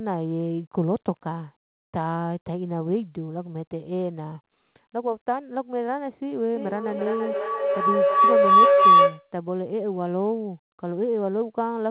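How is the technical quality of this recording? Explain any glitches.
The recording has one serious glitch, a feedback howl in the second half; the audio also stops at 4 kHz, consistent with a narrowband telephone codec.

Feedback howl, 6.55 to 9.34 s: two devices sharing a room kept passing the sound from loudspeaker to microphone and back, gaining level each trip. The repeats piled up into a tone around 1 kHz, pulsing roughly every third of a second and peaking about 12 dB above the speech.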